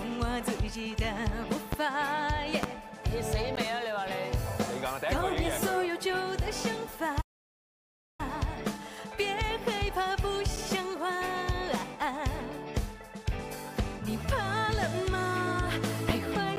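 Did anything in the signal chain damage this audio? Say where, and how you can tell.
Yes. Three kinds of damage are audible.

Loud pops sit at 1.73 to 1.76 s, 2.63 to 2.67 s and 16.09 to 16.12 s. Each is a single sharp pop, about 15 dB, 20 dB and 20 dB above the signal. The sound continues underneath. A voltage step in the analogue wiring or a driver glitch is the likely cause.

Gaps between stream segments occur at 3.55 s, 10.56 s and 16.56 s. They last 15 ms, 8 ms and 9 ms. Each is a hard-edged silent hole, with no sound lost. This is a playback-stage fault. Segment timestamps leave small gaps, which fits 6-second segments, and the player fills them with silence.

A playback stall runs from 7.21 to 8.20 s, about 980 ms of silence. The sound stops mid-flow and then resumes. The cause likely sits at the buffer or playback stage: the player ran out of data or its thread was blocked.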